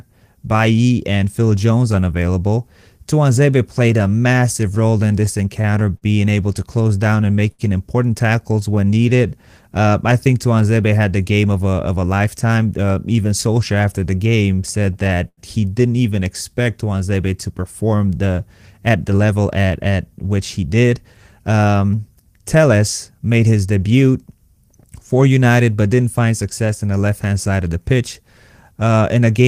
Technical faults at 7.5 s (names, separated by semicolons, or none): jitter buffer slow-down; scattered short gaps